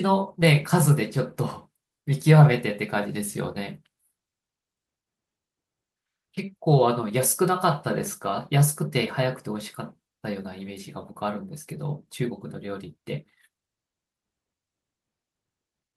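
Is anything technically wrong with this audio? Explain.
No, nothing technically wrong turns up here; the speech comes through without any problems worth flagging.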